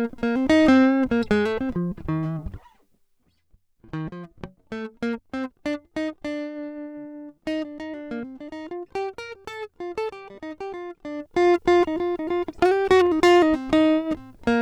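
A music clip with zipper noise from 11.10 to 11.49 s: a fast ticking zip rides on the sound as its level shifts by roughly 15 dB, applied in unsmoothed 1 dB steps at about forty a second.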